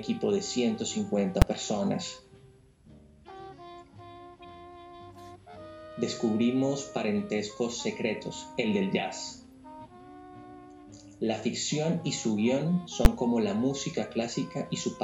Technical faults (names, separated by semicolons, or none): invalid numbers at full scale; corrupt frame decoded